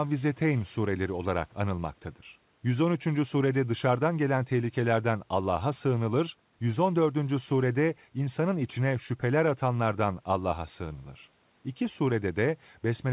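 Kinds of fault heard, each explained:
No faults heard in this clip.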